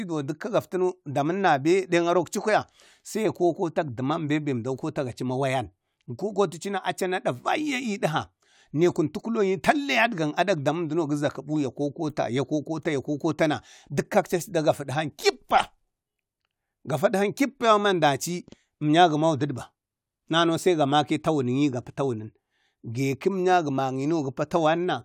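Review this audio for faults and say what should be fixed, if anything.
Nothing stood out on listening, so there is nothing here that needs fixing.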